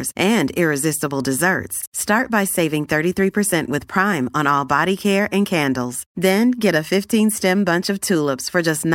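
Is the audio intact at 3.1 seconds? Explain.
Yes, the audio at 3.1 seconds is intact, with no dropout, click, distortion or other fault at that moment.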